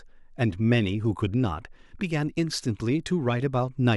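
No technical faults can be heard anywhere in the recording. The speech continues without any audible problem at any point.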